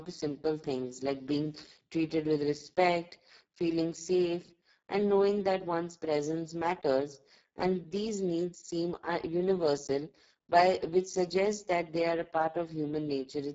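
Speex codec damage runs through the whole recording, from start to finish. This CELP speech coder has too few bits left to model the excitation, and the heavy degradation points to a very low setting of roughly 6 kbps. The speech comes out hoarse and noisy. The top band is cut, with nothing above 7.6 kHz, and what sits near it is a thin, noise-like fill rather than real detail.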